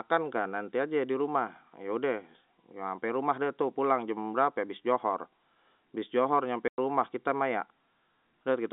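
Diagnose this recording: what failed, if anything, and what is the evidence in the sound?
The network dropped packets, and you can hear it as packet loss filled with silence: a hole in the speech from 6.68 to 6.78 s, about 100 ms, with hard edges where the sound cuts out and back in. The receiver had nothing for that stretch and played silence instead of concealing the gap. A 100 ms gap fits five lost 20 ms packets. Around it, the audio has the narrow 200 Hz to 3.7 kHz band of G.711 telephone coding.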